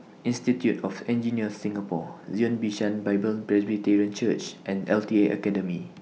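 Nothing in the recording stood out as a technical problem on listening.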